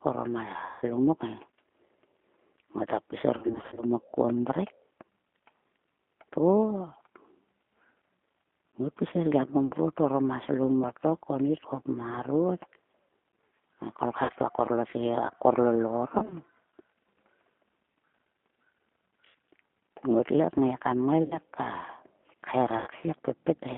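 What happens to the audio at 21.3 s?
From 21.23 to 21.38 s, VoIP packet loss concealed by the speech codec: about 80 ms of audio, consistent with eight 10 ms frames, is rebuilt from the last pitch and filter. It sounds like a fading buzzy tone or coloured noise, seen as a decaying smear in the spectrogram. The G.729 codec running throughout keeps everything inside 200 Hz to 3.4 kHz, so energy ends sharply above 3.4 kHz and the sound is plainly rough and synthetic.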